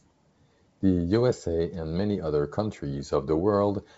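The speech clip has no technical faults. It comes through G.722 wideband telephone coding at 64 kbit/s, which carries the voice up to about 7 kHz with at most a faint trace of coding hiss in the upper band.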